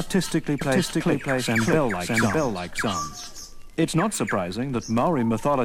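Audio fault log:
0.61–3.43 s: doubled audio track; an equally loud, dry copy trails by roughly 0.7 s and cuts in and out abruptly, likely from a second, slower capture path.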